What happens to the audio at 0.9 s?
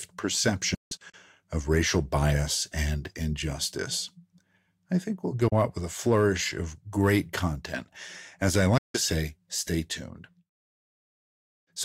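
Digital broadcast dropout: the receiver lost frames and muted from 0.74 to 1.14 s, leaving silent holes totalling 224 ms before "of racial bias and".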